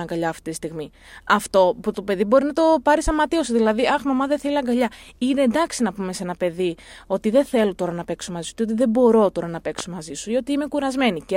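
Two loud pops sit on the speech, at 3.07–3.11 s and 9.79–9.82 s, each a single sharp transient; the second peaks around 10 dB above the speech, the first around 5 dB. Likely a voltage spike from a plug, switch or static; the speech continues underneath.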